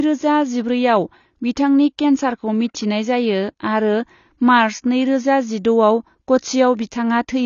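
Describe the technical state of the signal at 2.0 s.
At 2.0 s, as throughout, likely AAC compression at a low bitrate near 24 kbps discards detail: the speech is dull and smeared, with nothing above 6.9 kHz.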